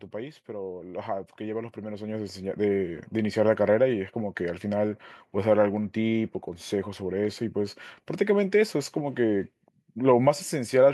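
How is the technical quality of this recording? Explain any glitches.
One fault stands out near the start. From 0.11 to 3.11 s, automatic gain rising: the gain control judged the input too quiet and lifted it about 13 dB. Speech and background swell together.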